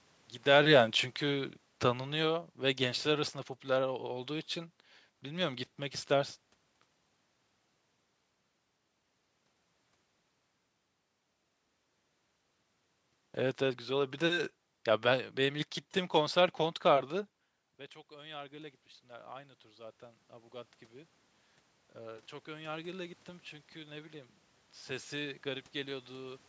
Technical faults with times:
0.40-4.02 automatic gain falling
18.08-20.81 automatic gain rising
21.97-26.44 automatic gain rising

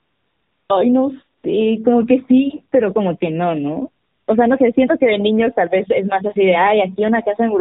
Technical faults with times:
0.00-7.61 AMR narrowband mobile codec
0.00-0.70 AMR comfort noise
1.38-1.44 AMR comfort noise
4.04-4.28 AMR comfort noise

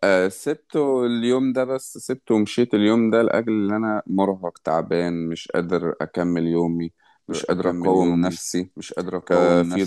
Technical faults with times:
7.30-9.86 doubled audio track

